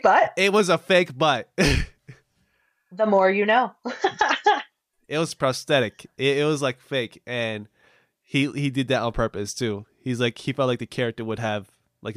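A speech recording, and nothing is technically wrong with it.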